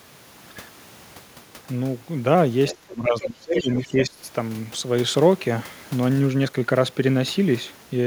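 At 2.68 to 2.76 s a short scrap of a second voice sits under the speech, about 15 dB below it. This is the other side's voice leaking through, likely because the far end's loudspeaker output reached the microphone and the echo canceller did not fully subtract it. It returns at 3.2 to 3.25 s and again at 3.57 to 3.81 s, both times louder, about 10 dB under the talker.

From 2.73 to 4.18 s the talker's own speech drops in level, with the deepest dips around 20 dB and roughly a second affected in total. This is speech suppressed in double talk. The cause is likely the echo canceller attenuating the near-end signal while the far side was also active, because it could not separate the talker from the loudspeaker echo. The later leaked fragments fall inside this stretch, and the first overlaps its start.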